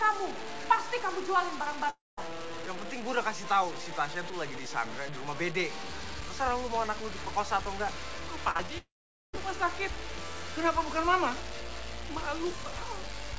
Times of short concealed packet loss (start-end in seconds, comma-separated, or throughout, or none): 8.51-8.70